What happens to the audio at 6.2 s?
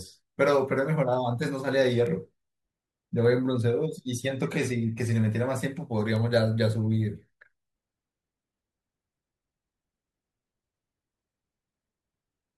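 A bit error spike at 6.16 s: one flipped bit throws a single sample off by a power of two, heard as one sharp, broadband tick.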